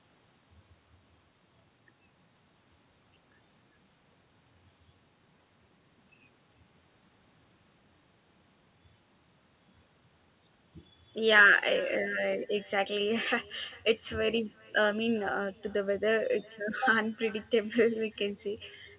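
Throughout the speech, nothing cancels the far-end loudspeaker leaking into its microphone. This echo with no canceller trails each phrase by roughly 0.4 s, about 25 dB down, and thin.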